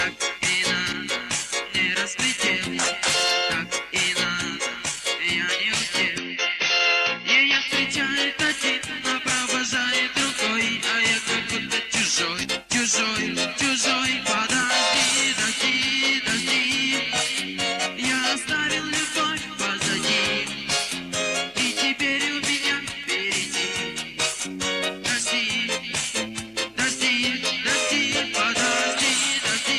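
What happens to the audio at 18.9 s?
Nothing goes wrong at 18.9 s; the audio there plays through intact, with no dropout, click, distortion or other fault.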